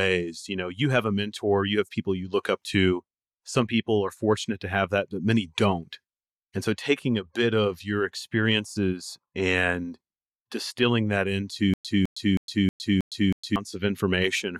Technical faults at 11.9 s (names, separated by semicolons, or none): stutter with silent gaps